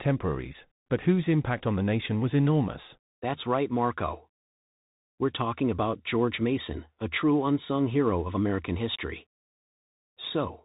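The speech passes through a Bluetooth CVSD headset codec throughout, its one-bit slope tracking cutting everything above 3.8 kHz and leaving plainly audible granular, scratchy distortion.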